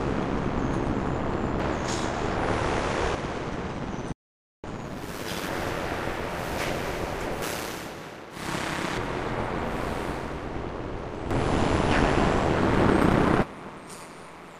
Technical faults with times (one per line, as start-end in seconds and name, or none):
4.12-4.64 audio dropout to silence